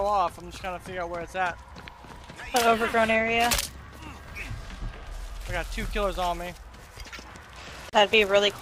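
Near the end there's a gap at a join of encoded pieces, about 34 ms of silence from 7.90 to 7.93 s, where untrimmed encoder delay and end padding meet before the sound picks up again.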